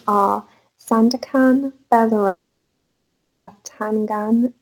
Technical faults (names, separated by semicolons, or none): sample clock jitter; long network dropout